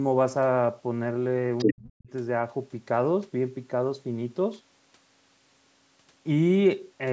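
Other side's voice leaking through, from 1.58 to 1.73 s: a second voice breaks into the speech at roughly the same loudness as the talker. This is likely loudspeaker echo that the echo canceller failed to remove from the microphone signal during call processing, which also caps the audio at 8 kHz.

Speech suppressed in double talk, from 1.65 to 2.1 s: overlapping the leak, the talker's speech falls away almost to silence for most of that stretch. The echo canceller likely could not tell near speech from echo and attenuated both heavily.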